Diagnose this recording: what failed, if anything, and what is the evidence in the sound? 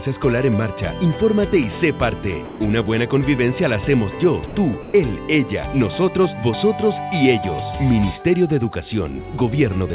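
The call processing stage failed. At 2.45–2.6 s, 4.46–4.55 s and 4.82–4.94 s, the sound gives way to steady comfort noise for 150, 90 and 120 ms. This is likely sound dropped by the voice detector: it mistook the audio for background and stopped sending.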